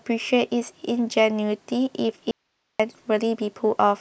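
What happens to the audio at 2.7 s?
The signal likely dropped out while the path stayed live, an audio dropout to a faint residue from 2.31 to 2.80 s, leaving abrupt hiss roughly 50 dB down.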